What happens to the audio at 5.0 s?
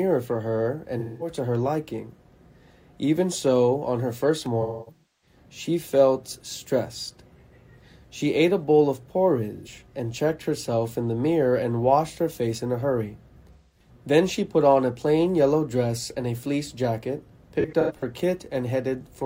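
Right around 5.0 s you're in the middle of an AAC frame loss with concealment, running from about 4.62 to 5.36 s. Roughly half a second of audio goes missing, scattered across about 0.6 s, with the longest continuous dropout around 0.3 s. The decoder fills each hole by reusing the last good spectrum, so instead of clean sound you get a smeared, noisy, phasey stretch.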